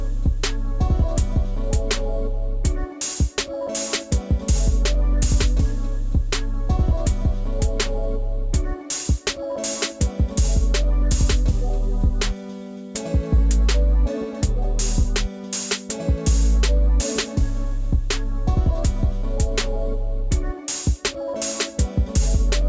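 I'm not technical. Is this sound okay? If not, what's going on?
No. Throughout the clip, the sound's sample rate was reduced without first removing the high frequencies it could no longer hold, which points to a drop to about 16 kHz. That causes aliasing: anything above 8 kHz folds back as wrong, gritty, metallic tones.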